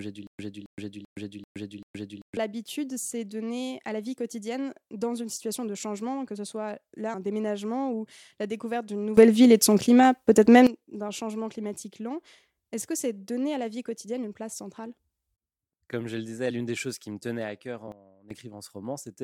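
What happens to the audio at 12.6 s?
Nothing goes wrong at 12.6 s; the audio is intact there, with no dropout, click, distortion or other fault.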